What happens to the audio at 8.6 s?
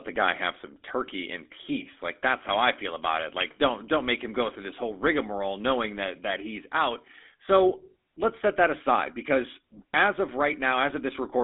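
At 8.6 s the speech carries the GSM full-rate codec, which runs through the entire clip. Nothing comes through above about 3.8 kHz, and the vocal tract model's regular pulse excitation gives a plainly audible buzzy, gravelly roughness, which fits the 13 kbps full-rate coder.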